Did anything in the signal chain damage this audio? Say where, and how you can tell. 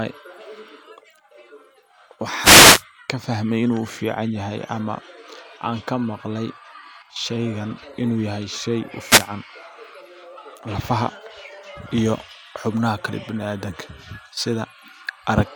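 Yes. The damage is in the analogue radio link, before conversion: two wireless microphone noise hits, at 2.37 to 2.84 s and 9.05 to 9.29 s, each a brief swish of static over the speech. When reflections cancel the FM carrier, the receiver's own noise rises through the audio, breaking into clicks at the deepest point. On a spectrogram each shows as a broadband hiss smear; on the waveform, a fuzzy noise band over the speech.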